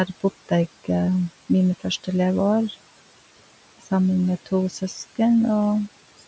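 Noise suppressor artifacts run through the whole speech clip. The suppressor estimates the steady room noise, which sits about 18 dB below the speech, and pulls those bands down by about 18 dB in every frame it judges to be noise only. The background therefore drops away in the gaps and comes back up whenever speech is present, so the noise floor pumps with the talking. On a spectrogram the low-level haze between phrases is dark and nearly empty, then fills in around each burst of speech. In the waveform the quiet stretches look flattened toward silence. The spectrum stops at 8 kHz throughout, as the call's microphone path would leave it.

From 4.7 to 4.96 s there is speech cut by the noise suppressor. For a short stretch, roughly a tenth of a second in total, the suppressor mistook quiet speech energy for noise and turned it down along with the background, by about 8 dB at the deepest point. 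That part sounds swallowed and faint, as though it slipped away. On a spectrogram the speech energy thins or breaks up there, and the waveform envelope dips briefly where it should stay level.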